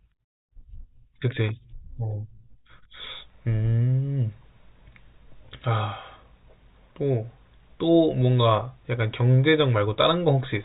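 No technical faults occur at any point in the recording, so there is nothing to describe in time order.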